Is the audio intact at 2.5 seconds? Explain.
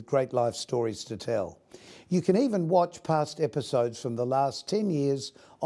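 Yes, at 2.5 seconds the audio is intact, with no fault present at that moment.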